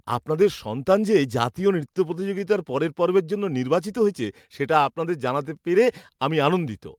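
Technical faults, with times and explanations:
Throughout, sample clock jitter: the converter's clock wanders by around a microsecond or two, so each sample lands slightly off time. The error follows the waveform's slope, adding a faint hiss at roughly 45 dB below the speech that swells on loud, bright sounds. A spectrogram shows a fine noise floor rising under strong high-frequency energy and disappearing in pauses.
1.81–2.43 s, scattered short gaps: between "আপনাদের সন্তান যে জাতীয়" and "পরের পর্বের", around five tiny holes, none much over 15 ms, were each patched by extending the preceding sound, covering about 50 ms in total. They come through as brief ticks and small smears. On the waveform, short repeated cycles replace the natural shape, and the spectrogram shows thin vertical blips.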